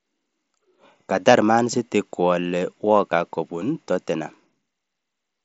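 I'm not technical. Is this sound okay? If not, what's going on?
Yes, nothing stood out as a problem when listening to this speech recording.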